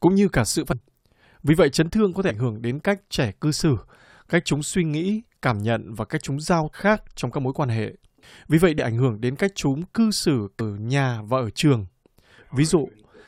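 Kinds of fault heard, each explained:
Damaged data in a compressed stream: parts of the compressed speech data arrive wrong, so the decoder misreads those frames, loses sync and has to hunt for the next valid frame header before decoding can resume. Each event sounds like a brief chirp or blip, heard five times: 0.71 to 0.73 s, 2.29 to 2.31 s, 6.73 s, 8.78 s and 10.59 to 10.61 s, each lasting about 14 to 22 ms.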